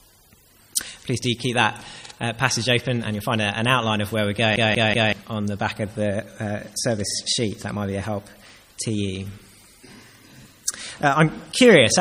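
Right at 4.56 s you get a CD stuck on one turn: a 189 ms slice of the sound plays three times back to back, with a tiny mute at each jump, until it frees itself at about 5.13 s. That's the laser getting kicked back one track at the same damaged spot every revolution, so the same fragment keeps coming round at an even pace. It's the quick mechanical stutter you'd instantly know from a skipping disc.

Then from 7.11 to 7.16 s there's an overlapping-chunks glitch. The audio was handled in 5-second blocks, and the new block started 50 ms before the previous one had finished, so that 50 ms gets played twice right at the join. You hear it as a brief hiccup, a small click-like stutter.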